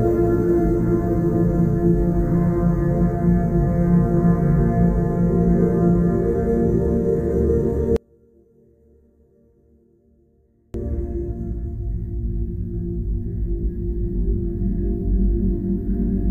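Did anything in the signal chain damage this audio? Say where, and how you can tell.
Yes. One channel inverted, from 7.96 to 10.74 s: the sounds collapse by about 35 dB when summed to mono, leaving only a faint residue. The likely stage is analogue wiring, a polarity-swapped leg cancelling everything common to both channels.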